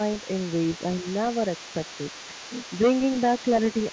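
A short speech recording made through a call's microphone path, band-limited with nothing above 8 kHz, has a second, quieter voice running under the main talker from 0.0 s to the end. This is the other side's voice leaking through, sitting roughly 20 dB below the main speech. The likely cause is the far end playing on the talker's loudspeaker, with the echo canceller failing to strip all of it from the microphone signal. Between 1.02 and 1.06 s the main voice briefly dips by around 5 dB for about 40 ms, a short notch in level while the leaking voice is also present. That pattern points to speech suppressed in double talk: with both sides active at once, the echo canceller likely could not tell the local talker from the loudspeaker echo and turned the whole signal down for that moment.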